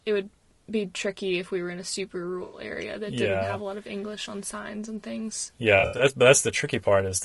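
Throughout the speech there is a rough, grainy texture, with noise filling the gaps between the harmonics of the voice and a top band that sounds thin and somewhat synthetic. This is low-delay AAC compression, likely AAC-ELD at a modest rate that fits about 32 kbps. Its short frames resolve the voice's pitch structure coarsely, and at this bitrate the coding damage is plainly audible.

From 2.43 to 2.60 s the sound turns smeared and noisy, a brief phasey patch where the signal loses its definition. This is AAC frame loss with concealment. About 100 ms of coded audio went missing, and the decoder filled the gap by reusing and reshaping the last good spectrum rather than leaving silence. A second, patchier episode runs from 5.79 to 6.05 s. There, 140 ms was lost in several gaps spread over about 200 ms, the longest around 70 ms, giving repeated bursts of the same blurred, noisy fill.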